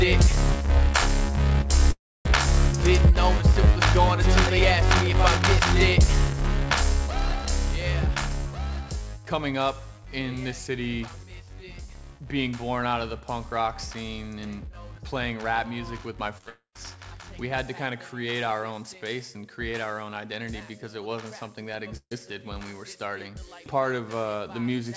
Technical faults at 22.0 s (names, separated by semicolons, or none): burst of packet loss